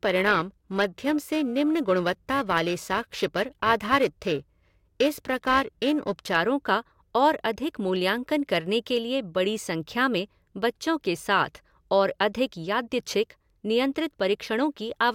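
Periodic clock jitter runs from 0.00 to 6.36 s, ending just before "का और अधिक मूल्यांकन". Interference is wobbling the converter's sampling clock at roughly 1 kHz. Each component of the speech picks up sidebands spaced about 1 kHz above and below it. These are strongest on the high frequencies and give the voice a rough, metallic edge that drops out in the pauses.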